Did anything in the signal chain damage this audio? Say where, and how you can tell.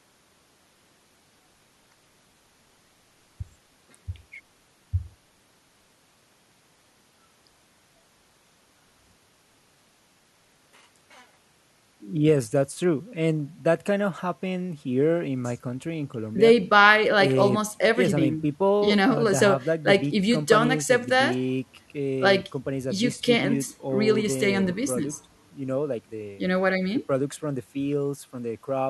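No, nothing in the signal chain has left an audible mark on this speech recording. No stage, from the input wiring through to playback, shows any sign of damage.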